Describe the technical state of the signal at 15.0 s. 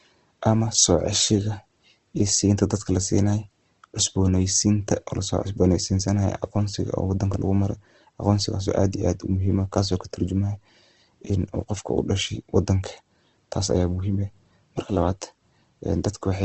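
At 15.0 s the speech carries the Opus compression present throughout: band energies are kept but filled with folded or noise content, so it sounds grainy and rough rather than swirly like MP3, with nothing above 8.2 kHz, which fits a likely rate near 16 kbps.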